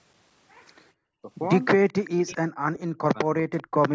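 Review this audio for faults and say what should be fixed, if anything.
Speech suppressed in double talk at 1.18 to 1.3 s and 2.15 to 3.75 s: the speech drops by as much as about 35 dB in the first case and about 40 dB in the second, with roughly a second affected during the longer stretch. The likely cause is an echo canceller that could not tell its own talker from loudspeaker echo while both sides spoke, so it turned everything down. To prevent it, use an echo canceller with proper double-talk detection, or have participants use headsets so there is little echo to fight.

Echo leak at 1.88 to 2.1 s: a faint delayed copy of the speech, about 25 dB below it, arrives 392 ms after the original. This is likely a loudspeaker on one end whose microphone picked up the call and whose echo canceller let part of it back through. To prevent it, give that endpoint a better-tuned echo canceller or replace its loudspeaker with headphones.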